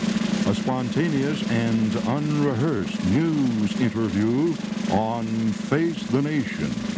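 At 2.78 to 2.82 s there is a short stall from a late packet. A packet arrived late, the jitter buffer ran dry, and the receiver stretched the last sound by about 20 ms until the packet arrived, then resumed at the same point, pushing everything after it 20 ms later. It sounds like a brief hold with a faint buzz. Unlike a lost packet, nothing is skipped, so no sound is cut away. The G.722 call path, with nothing above 8 kHz, carries this hold.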